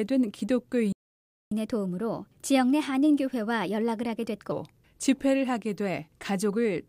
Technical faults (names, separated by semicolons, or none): playback stall; catch-up at higher speed